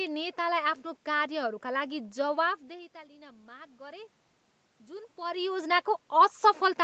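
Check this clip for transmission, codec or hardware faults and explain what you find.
One fault stands out, heard through a call path whose sound stops at 8 kHz. Automatic gain rising runs from 1.87 to 4.17 s. After the input drops by about 20 dB, the gain control gradually adds about 4 dB. Speech and room noise swell together, which sets it apart from a talker simply moving closer.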